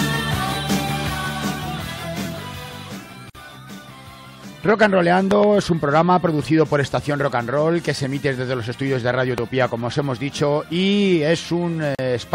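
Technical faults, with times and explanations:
3.30–3.35 s, gap at a join of encoded pieces: the sound drops out for about 50 ms with smeared edges, then resumes where it stopped, as separately encoded pieces were joined without trimming their start delay and end padding.
5.31–5.46 s, loud pop: a double pop, roughly 15 dB above the sound, which carries on underneath. It's likely a voltage spike from a plug, switch or static getting into the signal path.
9.38–9.40 s, loud pop: a single sharp pop of similar strength, likely the same kind of electrical glitch.
11.95–11.99 s, gap at a join of encoded pieces: another silent hole, about 39 ms, at a second untrimmed seam.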